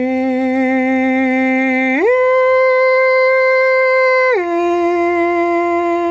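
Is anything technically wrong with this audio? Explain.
Yes, the music shows gain pumping throughout the clip. The gain swings by around 10 dB, which squashes the dynamics. The likely cause is gain set too high, with a fast limiter clamping each peak. On a waveform, the envelope looks flattened. The call-style band limit, with nothing above 8 kHz, is normal.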